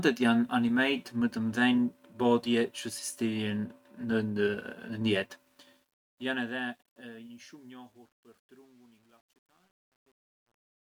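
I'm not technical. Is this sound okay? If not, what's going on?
No. From about 5.38 s the speech begins fading out, and instead of melting away cleanly it turns gritty, worst from 6.82 s to the end at 10.86 s. This is truncation distortion on a fade. The volume-lowering step threw away fine detail, which fits a stage keeping only 10 bits, so the quiet tail collapses into a few rough steps instead of a smooth, gentle decline.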